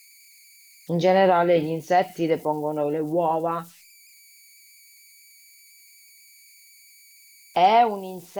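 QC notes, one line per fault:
Throughout, converter idle tones. A faint whistle of around 2 kHz sits in the pauses, and grainy noise lies under the quieter speech, about 32 dB below it. An undithered delta-sigma converter falls into repeating bit patterns at low levels, and those patterns sound as tones.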